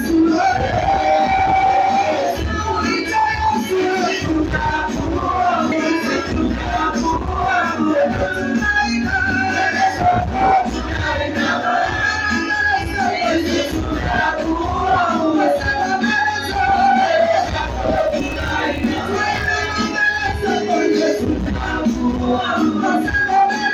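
From 17.96 to 20.30 s, a filter restarted on every block, losing its state each time, so the sound carries a level-following 50 Hz buzz, pointing to roughly 20 ms blocks.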